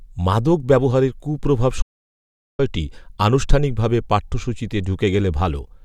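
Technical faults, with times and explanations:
1.82 to 2.59 s, audio dropout to silence: the input signal was likely interrupted for a moment, through a disconnected device, a failed link or an accidental mute, while recording carried on writing silence. Right after "মাদক ব্যবহারের কূপ্রভাব" the speech stops abruptly and gives way to 0.77 s of total silence with no room tone underneath, then cuts back in mid-flow. Whatever was spoken during that stretch is lost.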